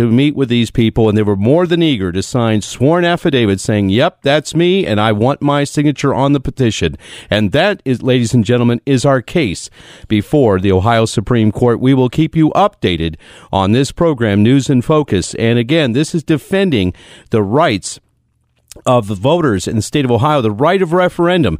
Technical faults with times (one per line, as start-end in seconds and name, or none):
none